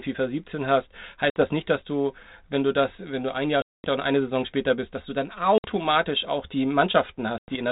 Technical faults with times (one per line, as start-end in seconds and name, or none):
1.30-1.42 packet loss on an ADPCM call
3.62-3.85 packet loss on an ADPCM call
5.58-5.66 packet loss on an ADPCM call
7.38-7.56 packet loss on an ADPCM call